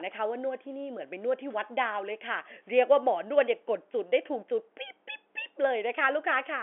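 There are no technical faults to describe in time order anywhere in this speech clip.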